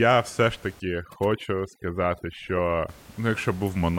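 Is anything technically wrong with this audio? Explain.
Yes. From 0.8 to 2.89 s, just after "все ж", the speech shows overdone noise removal. A noise reducer set too aggressively is cutting individual frequency bands down or out whenever they sit near its noise estimate, so quiet parts of the speech vanish along with the room noise that elsewhere sits about 25 dB below the speech. The gaps fill with near silence and twinkling specks. Unlike low-bitrate codec artefacts, the damage tracks the noise floor, and the background itself drops away.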